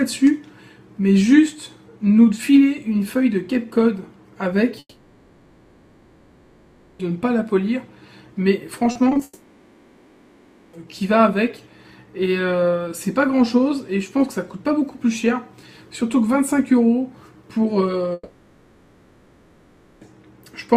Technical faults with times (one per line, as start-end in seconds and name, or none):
4.79-7.01 long network dropout
8.91-9.21 repeated packet loss (robotic sound)
9.23-10.75 long network dropout
18.13-20.13 long network dropout